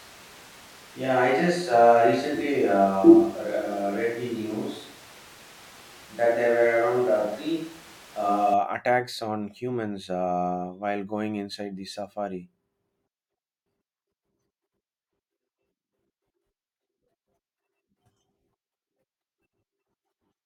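Speech recording that opens roomy and hollow, thin in the bass, with room noise roughly 25 dB below the speech and little level change, likely a switch to a distant microphone. It runs from the start until 8.54 s, snapping back to close pickup at "attacks on humans".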